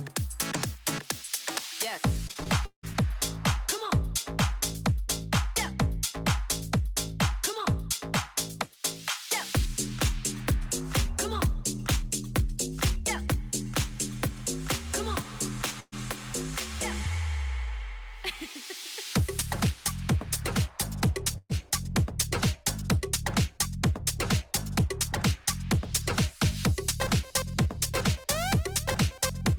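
From 2.27 to 2.96 s there's a stretch of repeated packet loss, the robotic sound kind. Several holes land close together, and each one gets papered over by stretching the last bit of sound, so it comes out choppy. About 0.27 s of that stretch is filled-in guesswork, roughly 40 percent of it, and the longest single gap runs about 175 ms. Around 0.26 s of the real audio is simply gone.

Then there are two separate bursts of packet loss, one at 15.80 to 15.94 s and another at 21.38 to 21.51 s. Each time a short run of packets went missing, about 120 ms of audio in all. The receiver kept extending the last sound and faded it down, ending in a brief silence of about 20 ms, before picking up further along with that chunk skipped.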